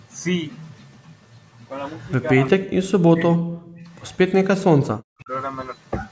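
Echo leak, 2.0 to 2.11 s: a very faint copy of the speech returns about 170 ms late, likely because the far side's loudspeaker was picked up by its microphone and the echo canceller left part of it in the return path. Speech suppressed in double talk, 2.57 to 3.89 s: for roughly a second in total the speech dips deeply and breaks into pieces, likely because both sides spoke at once and the canceller, unable to tell the local talker from the loudspeaker echo, pulled everything down. Inside that stretch, a second echo leak from 3.51 to 3.64 s brings back the same 170 ms delayed copy, faint but noticeably stronger than the first, as the canceller likely failed to fully track the echo while the talkers overlapped. Two more suppression events follow: a shallow, brief dip at 4.3 s, and from 4.62 to 5.3 s a much deeper one, around half a second in total, where the speech is pushed almost to silence in chopped fragments, likely the same double-talk gating.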